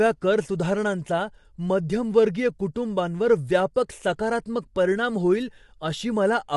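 From start to finish, the speech sounds rough and grainy. A noise sits between the harmonics, so the voice loses its smooth, clean tone. The top band is dull or synthetic. The damage is plainly audible. The likely cause is low-delay AAC compression. Its short frames capture pitch harmonics poorly. At this level the result fits a rate of around 32 kbps.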